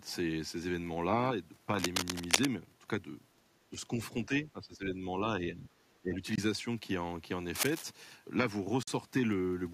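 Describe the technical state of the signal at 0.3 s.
The signal at 0.3 s is intact, with no audible fault at that point in the speech.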